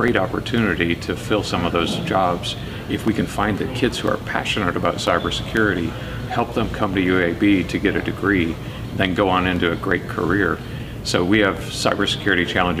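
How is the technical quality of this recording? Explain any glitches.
The recording has periodic USB or driver dropouts. From 0.08 s to 12.57 s, a stall every 0.5 s silences around a millisecond of audio about thirty times, heard as regular ticks. A waveform shows tiny evenly spaced gaps, and a spectrogram shows thin vertical broadband lines.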